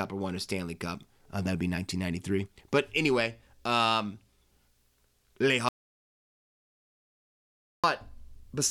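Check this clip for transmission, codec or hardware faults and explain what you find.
One fault is audible: an audio dropout to silence from 5.69 s to 7.84 s. The speech stops mid-flow and about 2.15 s of dead silence follows, with no room tone. The input feed was likely lost, perhaps a disconnect or mute, while recording continued writing silence.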